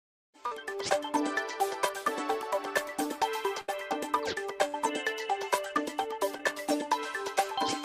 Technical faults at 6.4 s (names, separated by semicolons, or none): short concealed packet loss